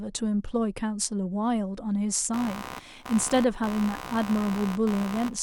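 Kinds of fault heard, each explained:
computer activity noise: a buzz pulsing around 70 times per second from 2.33 s onward, caused by computer load shifting the audio circuit's shared ground.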